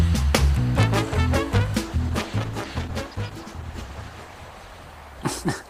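From 1.82 s to the end, a call bitrate drop from 96 to 12 kbps forces coarser coding: audio turns rough, watery and muffled, unlike packet loss, which leaves gaps.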